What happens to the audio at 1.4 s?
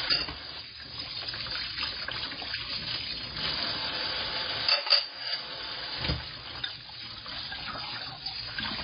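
At 1.4 s the audio has heavy MP3 compression damage, likely the cause, present through the whole clip. Nothing remains above 5 kHz. Weak frequency lines drop in and out between frames, so the sound turns watery and swirly, and attacks smear. This fits a very low bitrate, around 16 kbps.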